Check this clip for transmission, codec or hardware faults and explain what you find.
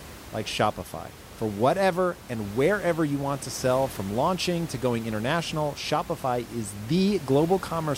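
I find no faults in this clip; the room noise about 17 dB below the speech belongs to the recording itself.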